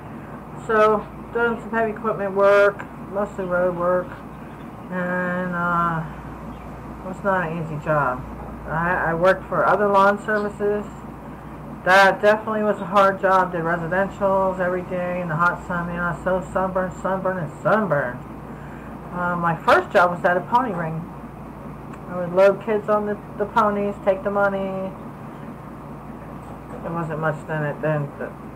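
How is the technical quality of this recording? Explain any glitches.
Nothing in the recording stands out as a glitch, so there's nothing here that needs explaining.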